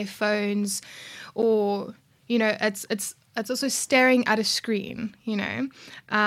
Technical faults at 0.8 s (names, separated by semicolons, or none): none